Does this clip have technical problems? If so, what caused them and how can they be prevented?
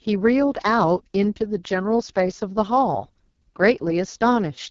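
Yes: the speech sounds rough and raspy throughout and nothing reaches above 7.2 kHz, pointing to the AMR wideband (HD Voice) codec at its lowest rate, around 6.6 kbit/s. Run it at 12.65 kbit/s or higher to avoid this.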